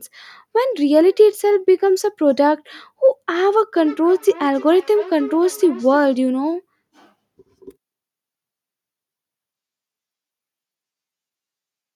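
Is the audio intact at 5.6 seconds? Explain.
No. At 5.6 seconds the speech sits inside a stretch of feedback echo between two devices that runs from 3.76 to 6.2 seconds. Two devices on the same call share the room. One plays back what the other's microphone sent, and that microphone picks it up again. Neither echo canceller removes the other device's playback. Each word returns about every 300 ms, thinner and more ringing, peaking about 18 dB below the speech.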